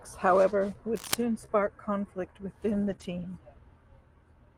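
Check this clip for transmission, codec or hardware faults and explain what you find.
Three kinds of fault show up: a burst of cable scratch noise, two short concealed packet losses, and two stretches of lost packets rebuilt from error correction.

Cable scratch noise runs from 0.95 to 1.15 s. A dense, uneven scratching sits over the speech, about as loud as the speech itself. The likely cause is a worn cable or connector being moved, so its contact resistance jumps rapidly.

Short concealed packet loss occurs at 1.45 to 1.50 s, just before "conflict within", and again at 2.96 to 3.00 s. About 20 ms of audio never arrived. The decoder extended the preceding sound to fill the gap, then blended back. Each is heard as a brief smear.

Lost packets rebuilt from error correction appear at 2.88 to 2.94 s, just after "conflict within", and at 3.00 to 3.06 s. Each stretch lasts 40 ms and fits two lost packets. 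The next packets carried low-bitrate copies, so there is no gap. The audio turns rougher and noisier there.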